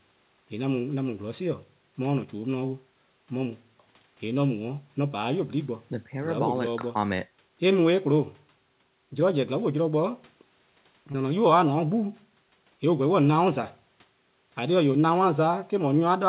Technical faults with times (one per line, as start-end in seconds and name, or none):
11.12-11.16 short concealed packet loss